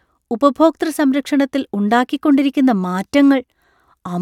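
A speech recording, and nothing is technically wrong with it.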